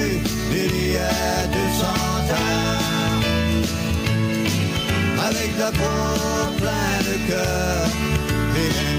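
Gain pumping runs through the whole clip. The swing is roughly 5 dB. Loud and quiet passages sit closer together than they should. The result sounds squashed and restless. The likely cause is input gain set far too high, with a fast limiter or compressor clamping down on each peak and releasing between them.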